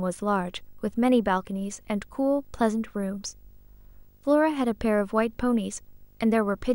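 From start to finish, video or display buzz sits well beneath the speech: a 50 Hz buzz at the picture's field rate with hash above it, plus a faint 15.6 kHz line-rate whine. That whine, absent from ordinary mains hum, points to screen or cable coupling.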